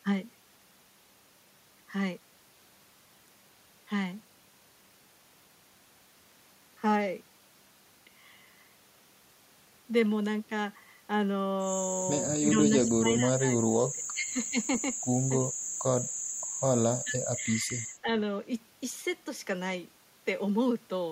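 The speech level dips three times, from 12.51 to 13.55 s, 13.71 to 14.37 s and 17.04 to 18.13 s. Each dip lasts well under a second in total and thins the voice or drops it out in fragments, by about 15 dB, then about 25 dB in the second and deepest, then about 15 dB again. This is likely speech suppressed in double talk, where an echo canceller treats overlapping far-end speech as echo and attenuates the near talker with it.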